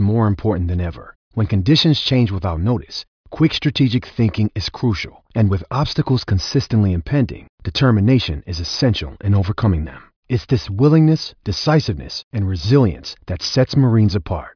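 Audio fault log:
Nothing stood out on listening through the speech in this clip.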